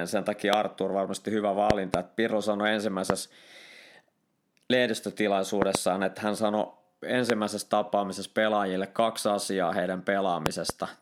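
Sharp loud pops cut through the speech at 0.53–0.55 s, 3.10–3.12 s and 7.30–7.32 s, with double pops at 1.70–1.96 s, 5.62–5.77 s and 10.46–10.72 s, peaking about 20 to 25 dB above the signal while speech continues beneath. A likely cause is sudden voltage pulses from static, switching or a driver glitch.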